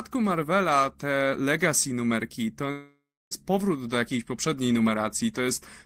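A speech clip in which a long network dropout likely stopped audio arriving from 2.71 s to 3.34 s. The receiver stretches the last sound into a fading buzz, about 0.3 s of near silence follows, and roughly 0.6 s of speech is simply gone.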